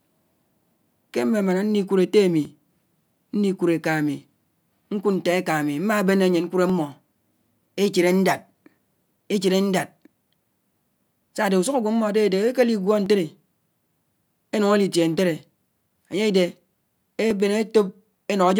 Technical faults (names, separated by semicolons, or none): clock drift buffer slips